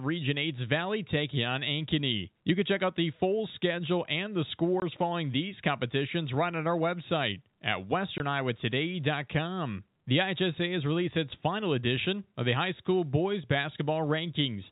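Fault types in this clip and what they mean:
packet loss filled with silence: hard-edged 20 ms silent holes, each fitting one lost packet, rather than leaving the smeared repeats of concealment.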